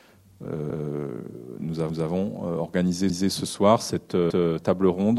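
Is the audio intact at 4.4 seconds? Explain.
No, at 4.4 seconds the audio sits inside an overlapping chunks fault running from 4.30 to 4.50 s. Each 1-second chunk begins before the previous one finishes, so about 200 ms of sound plays twice at the join, heard as a click or a stutter.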